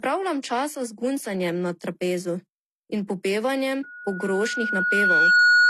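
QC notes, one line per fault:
Throughout: transcoding between lossy codecs. The audio was likely passed through a low-rate codec and then re-encoded. Nothing above 12.2 kHz, with the different codecs' artefacts heard together.
3.83–5.70 s: loudspeaker feedback squeal. The mic picks up its own loudspeaker and the loop gain exceeds one. A 1.4 kHz tone swells over about 1.5 s after "in popevanjem", ending about 10 dB above the speech.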